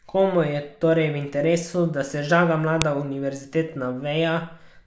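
At 2.82 s, right after "interesu da se žaga", a single sharp, loud click cuts through the speech. This is a file header played as audio: a joined WAV piece kept its header, and those bytes were rendered as a brief burst of samples.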